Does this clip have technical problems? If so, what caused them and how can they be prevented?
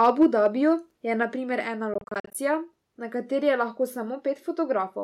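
Yes. Microphone overload runs from 0.03 to 0.47 s: peaks push about 3 dB past the converter's limit, flattening their tops on a small share of samples and adding a harsh crackle, likely from input gain set too high. Keep the microphone input lower so peaks stay below full scale.

Microphone volume stepped down at 0.23 s by about 2 dB and again at 1.23 s by about 3 dB. The whole sound, speech and background together, drops abruptly, likely because the call software cut the device's input volume after detecting clipping. Setting a sensible input level beforehand, or turning off automatic microphone adjustment, avoids these sudden level steps.

Bluetooth dropout between 1.94 and 2.35 s: roughly 200 ms of audio goes missing in short silent holes scattered across about 400 ms, the longest about 44 ms, with playback resuming further on each time. This likely comes from packets failing to reach the headphones in time. 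Keeping the headphones close to the source, away from radio interference and obstructions, prevents these gaps.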